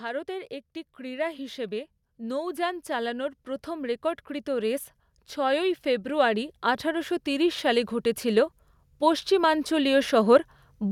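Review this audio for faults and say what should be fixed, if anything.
Automatic gain rising runs from 0.05 s to 10.48 s. The AGC judged the input too quiet and ramped its gain by about 18 dB, so speech and background swell together. Set a fixed input gain at a proper level and disable AGC on the capture path.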